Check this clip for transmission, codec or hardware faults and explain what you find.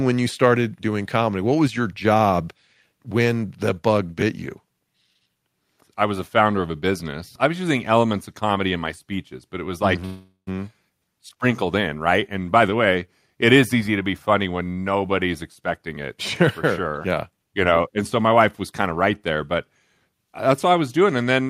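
Two kinds of transmission fault appear: one call audio freeze and two stretches of jitter buffer speed-up.

Call audio freeze, 10.05 to 10.49 s, right after "but it was like": the last sound is held as a fading buzz or hiss for about 0.4 s, ending in roughly 0.11 s of silence. Then the audio resumes exactly where it stopped. The likely cause is delayed packets leaving the jitter buffer empty. Nothing is skipped, which sets it apart from a dropout; the gap is inserted rather than cut out.

Jitter buffer speed-up, 13.74 to 14.04 s, between "the way it is" and "funny when nobody's", and 15.42 to 17.81 s, starting after "funny when nobody's": the receiver trimmed a backlog by cutting tiny pitch-period slices. The first stretch runs at 110% with about 40 ms removed, the second at 108% with about a fifth of a second removed. It sounds hurried, but the pitch stays put, which distinguishes it from resampling-style speed changes.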